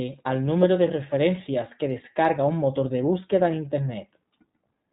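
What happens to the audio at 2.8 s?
At 2.8 s you're hearing the iLBC codec, as everywhere in this speech: nothing above 4 kHz, and each 20 ms frame coded separately leaves it plainly rough and synthetic.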